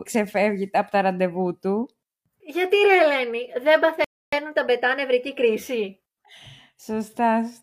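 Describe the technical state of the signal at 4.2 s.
Speech drops to dead silence from 4.04 to 4.33 s, then resumes exactly where it stopped, at "τα μπετά νευρική", with nothing skipped. This is a rebuffering stall: playback exhausted its downloaded audio and waited 282 ms for more, adding time rather than losing any.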